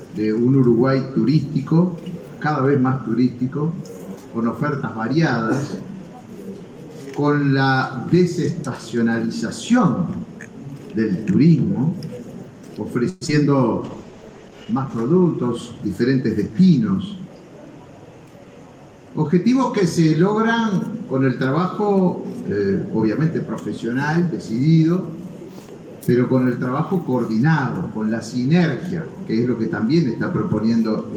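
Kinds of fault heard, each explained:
Call audio freeze: From 13.09 to 13.23 s the sound stops advancing and the last moment is stretched into a fading buzz for about 118 ms. Nothing is lost. Late packets likely emptied the receive buffer, so the audio simply resumes later.
Short concealed packet loss: At 13.27 to 13.30 s about 40 ms of audio is missing, and only a short synthetic patch of roughly 11 ms covers it. The result is a quick smear as the sound jumps ahead to real audio again.
Call bitrate drop: From 13.83 to 16.10 s the encoding rate falls from 32 to 13 kbps. It stays at its lowest for about 1.2 s. The sound becomes coarse and watery, with the top end dulled, until quality returns.
Jitter buffer speed-up: From 15.85 to 17.37 s the receiver trims tiny pitch-length slices to work off the extra delay. Around a tenth of a second is removed in total. Playback runs about 7 percent faster at unchanged pitch, sounding slightly rushed.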